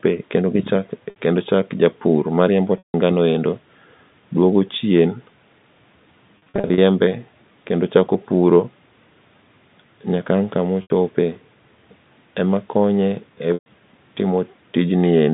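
Packet loss with pitch repetition hits at 1.10 s (60 ms, before "kendo chak japur mariembo"), 2.78 s (160 ms, right after it), 6.38–6.78 s (scattered short drops), 10.82 s (80 ms) and 13.54 s (120 ms, after "emakonye e"). The receiver loops the last pitch period, so short gaps buzz briefly and longer ones fade out.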